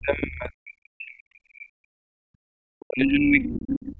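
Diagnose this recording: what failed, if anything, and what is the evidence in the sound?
Speech drops by about 40 dB and fragments from 0 to 2.09 s and 2.73 to 3.99 s. This is likely speech suppressed in double talk, with the call's echo canceller attenuating both talkers.

Room sound dips about 39 dB from 2.37 to 2.45 s. This is background gated by the echo canceller, which clamps the microphone while the loudspeaker plays.

A faint second voice, roughly 20 to 25 dB below the talker, surfaces at 3.42 to 3.69 s and 3.86 to 3.92 s. This is likely the other side's voice leaking through as uncancelled loudspeaker echo.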